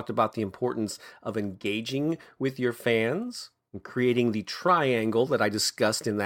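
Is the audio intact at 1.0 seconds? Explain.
Yes, the speech at 1.0 seconds plays through intact, with no dropout, click, distortion or other fault at that point.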